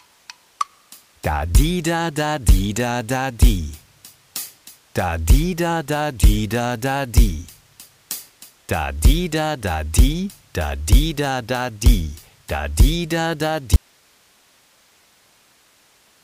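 At 13.76 s the sound drops out abruptly, leaving only hiss around 40 dB below the programme level through to the end. This is an audio dropout to a faint residue, likely caused by the signal feed failing while the downstream path stayed live and passed its own noise.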